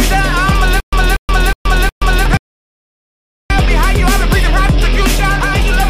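From 0.80 to 2.26 s there's a stutter with silent gaps: a 239 ms burst repeats four times, each followed by 125 ms of dead silence, likely a stalled stream retrying. Then at 2.37 s a rebuffering stall drops to silence until 3.50 s, adding 1.13 s before the sound resumes right where it stopped.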